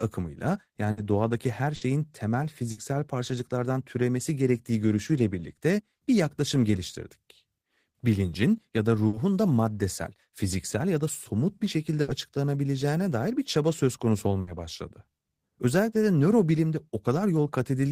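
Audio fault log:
0.91, 1.75, 2.71, 9.07, 12.01 and 14.41 s: burst of packet loss. At each point, roughly 60 ms is filled by stretching and fading the preceding sound, then speech resumes with 60 ms missing.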